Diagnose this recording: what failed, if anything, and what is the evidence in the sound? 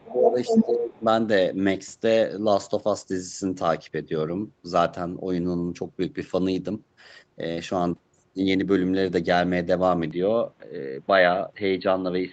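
Speech suppressed in double talk, call processing: from 0.0 to 1.03 s the talker dips by up to about 20 dB, roughly 0.7 s in total, likely from the echo canceller ducking both sides.

Other side's voice leaking through, also call processing: a second voice comes in from 0.09 to 0.66 s about 5 dB above the talker, then a faint scrap about 35 dB down at 0.96 to 1.02 s. That's likely residual echo the canceller failed to remove.

Input switched to a poorer device, likely at the driver/device stage: from 10.11 s the band narrows and new noise sits about 35 dB down, with no gap and no level jump.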